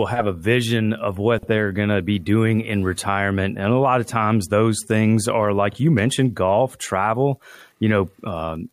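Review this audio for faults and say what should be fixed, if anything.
A brief garbled flutter occurs twice, at 1.38 to 1.48 s and 5.70 to 5.76 s. These are frames out of order: two adjacent blocks of audio were decoded in swapped sequence, so the short stretch plays back-to-front in halves while keeping its overall length. The swapped blocks are about 46.4 ms at the first spot and 23.2 ms at the second, consistent with two-frame and one-frame blocks. Reordering packets by sequence number in the jitter buffer before decoding would prevent this.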